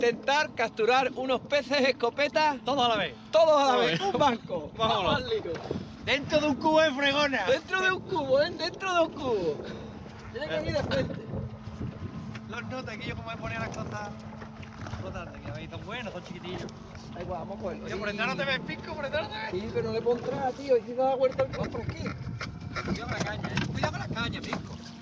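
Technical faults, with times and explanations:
No technical faults are present in this clip.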